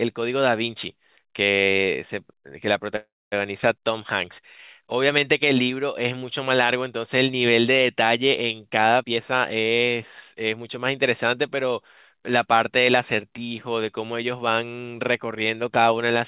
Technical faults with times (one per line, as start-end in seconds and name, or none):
2.96-3.34 call audio freeze
9.03-11.71 jitter buffer speed-up